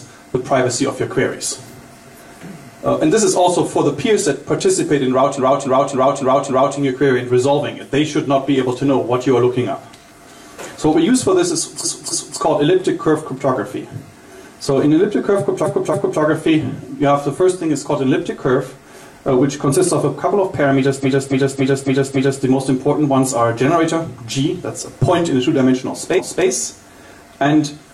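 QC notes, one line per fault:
5.34–6.74 s, 11.80–12.36 s, 15.61–16.16 s, 20.99–22.39 s, 26.15–26.43 s, repeated frames: the same 0.28 s block of compressed audio plays again 5, 2, 2, 5 and 1 extra times, heard as a stutter. Each run adds 1.39, 0.56, 0.56, 1.39 and 0.28 s of length.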